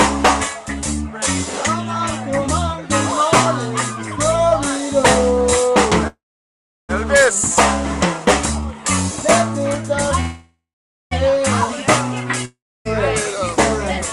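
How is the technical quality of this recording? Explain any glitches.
There are three glitches, all gaps where the sound briefly stops and carries on.

The first two are call audio freezes, at 6.07 to 6.91 s and 10.20 to 11.13 s. The last sound stretches into a fading buzz or hiss, then sits quiet for about 0.7 s and 0.49 s. Then it picks up exactly where it stopped, nothing lost, just running 815 ms and 910 ms later. That's likely late packets draining the jitter buffer.

The third is a long network dropout at 12.45 to 12.87 s. Same fading tail, with about 0.28 s of quiet. When the sound returns, roughly 400 ms has gone missing, likely because that stretch of packets never arrived to be played.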